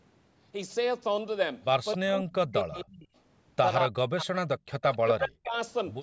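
From 1.96 to 3.13 s the speech sinks and breaks into pieces, falling by about 40 dB at its deepest, with roughly a second of sound affected in all. The same dips return from 3.88 to 4.34 s and from 4.96 to 5.56 s, each time about half a second in total. This is speech suppressed in double talk. Both ends were likely talking together, and the echo canceller, unable to tell the local talker from loudspeaker echo, turned everything down.

Inside the first suppressed stretch, at 2.72 to 2.85 s, a faint delayed copy of the speech slips through, about 20 dB below the main level and trailing it by 264 ms. A second scrap appears at 4.78 to 4.97 s, just before the last dip. This is echo leak, likely from a loudspeaker whose echo canceller left some of its microphone pickup in place, which was then sent back down the line. The call microphone processing, whose band stops at 8 kHz, is not at fault.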